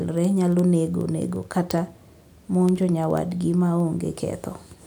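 From 0.11 s to 4.85 s the speech carries word clock ticks: roughly every 70 ms, about seventy in all, one sample slips as the receiver's clock drifts around 300 ppm from the sender's. Their rigidly steady rhythm, despite uneven strength, sets them apart from random clicks or dropouts.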